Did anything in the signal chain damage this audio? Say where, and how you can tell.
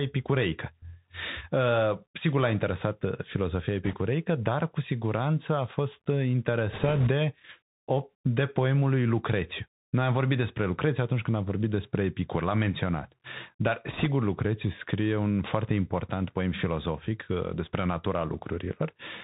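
Yes. The codec stage is the main culprit. The whole clip has passed through a Bluetooth CVSD headset codec, a narrowband link consistent with 64 kbps CVSD. Each sample is reduced to a single up-or-down bit, with a step size that has to adapt to the signal. You can hear this plainly: there is nothing above 4 kHz, s sounds come out scratchy, a granular hiss sits under the speech, and loud high sounds distort where they outrun the step size.

The wireless link itself also failed three times, with bit errors on the Bluetooth voice link. The first runs from 3.85 to 3.96 s, right after "interesat uh filozofia" and before "dar cu siguranță a". The second runs from 6.73 to 7.09 s, following "siguranță a fost uh". The third runs from 13.87 to 14.06 s. There are no sharp clicks, because each flipped bit nudges the signal only slightly before the error fades. Instead, each burst adds a rushing crackle, and the roughly 3 percent error rate makes the first burst the harshest.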